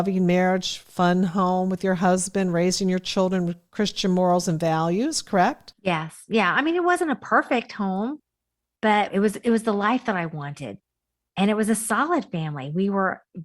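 Nothing in this recording jumps out as a technical fault; there's no moment anywhere along the way where something goes wrong.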